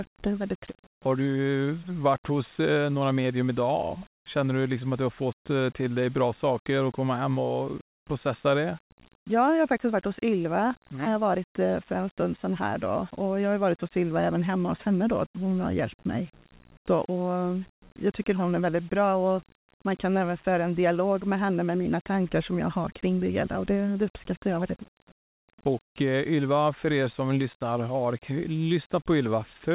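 No technical faults occur at any point in the speech.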